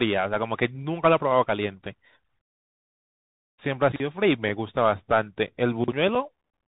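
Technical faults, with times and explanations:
Throughout: Bluetooth CVSD headset codec. The speech is stuck in a narrow band with nothing above 4 kHz, a grainy hiss sits underneath, and s sounds come out scratchy where the one-bit up/down steps can't keep pace, which fits a 64 kbit/s CVSD link.
3.92–4.00 s and 5.84–5.92 s: chunks out of order. Each time a 40 ms slice of audio lands one chunk late, playing after the piece that should follow it. Nothing goes missing, but the swapped order gives a brief jumbled blip with hard joins.
4.49 s and 6.15 s: unconcealed Bluetooth headset packet loss. A single voice packet, about 3.8 ms, drops out between headset and phone and nothing fills the gap, so you get a tiny sharp-edged hole, with the sound briefly coming back quieter.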